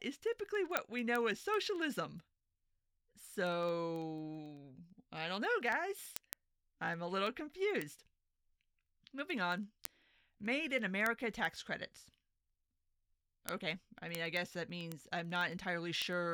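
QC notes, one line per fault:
0.11–16.29 s, word clock ticks: a steady tick roughly every 50 ms, as an unlocked receiver whose clock is off by about 400 ppm slips a sample each time the clocks drift a full sample apart.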